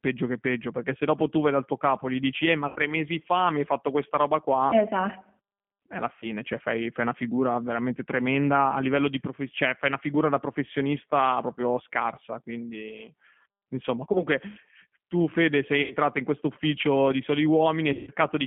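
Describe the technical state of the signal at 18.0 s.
At 18.0 s the signal is inside a stretch of VoIP packet loss concealed by the speech codec, running from about 17.93 s to 18.11 s. With packets missing, the decoder keeps repeating its last pitch period and vocal tract filter at falling gain, so the sound smears into a buzzy tone or coloured noise that fades instead of dropping to silence. The gap itself fits roughly 140 ms of lost audio, and the distortion lingers a little longer because each rebuilt frame feeds the next. That smooth, pitched fade is what sets it apart from a plain dropout or a hard mute, which would cut abruptly to silence.

Underneath, the whole clip carries G.729 codec coloration. Its line band runs only from about 150 Hz to 3.4 kHz, so there is nothing above 3.4 kHz, and the plainly audible roughness and synthetic edge point to an 8 kbit/s G.729A stream. This speech is reconstructed from a coarse filter and a few pulses per frame rather than carried as a waveform. 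That sets it apart from a simple low-pass or telephone filter, which would sound dull but not rough.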